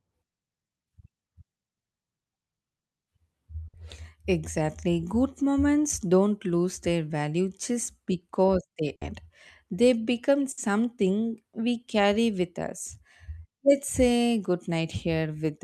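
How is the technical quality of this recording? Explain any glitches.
The recording has three short breaks from a burst of packet loss, at 3.67 s, 8.95 s (just after "value just because they") and 10.51 s. At each, about 60 ms of audio never arrived in time. The receiver filled the gap by extending the last sound and fading it out, giving a brief held buzz or fading hiss, then jumped ahead. Unlike a plain dropout, there is no dead silence, and about 60 ms of speech is skipped.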